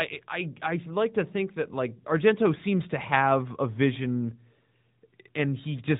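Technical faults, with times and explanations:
Throughout: AMR narrowband mobile codec. The speech has been squeezed through a 2G/3G-style AMR-NB encoder running at 8 kHz sampling, so nothing above about 3.8 kHz survives and the voice sounds boxed-in and phone-like. The encoder rebuilds each 20 ms frame from a vocal-tract filter excited by a handful of pulses, and the resulting buzzy, synthetic edge is plainly audible, which fits one of the mid-rate modes near 10.2 kbps.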